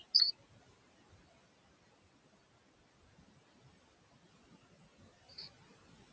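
A speech recording carries noise suppressor artifacts from start to finish. The processing pulls the room noise down by about 16 dB in the gaps, then lets it swell back under each phrase, so the background pumps with the speech. Steady room noise, sitting about 19 dB below the speech, would hold a constant level instead. Two moments of chunks out of order follow, from 0.78 to 0.9 s and from 5.64 to 5.76 s. At each, a 60 ms chunk plays one slot late, swapping places with its neighbour. What separates this from packet loss or a dropout is that no audio goes missing and no gap or filled-in smear appears. The same sound is simply heard in a scrambled order, a brief stutter rather than a hole. The call microphone path limits content to below 8 kHz.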